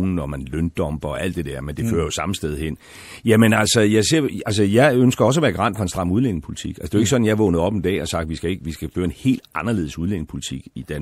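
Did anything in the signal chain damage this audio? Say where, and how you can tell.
Yes. MP3 compression runs throughout, at the codec stage: the speech sounds watery and swirly with dulled treble as weak frequency lines flicker, likely from an encode near 64 kbps.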